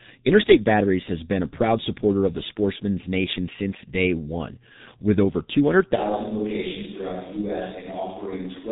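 Throughout, the speech carries heavy G.723.1 codec damage. Nothing passes above 3.8 kHz. The long frames and slow voice model leave it muffled and hoarse, with smeared consonants. The coarseness fits a very low rate near 6 kbit/s.

At 5.97 s the sound turns hollow and roomy, with thinner bass. The level drops by about 5 dB. Background noise rises to around 30 dB below the speech. This likely reflects a switch to a distant microphone, and it stays to the end.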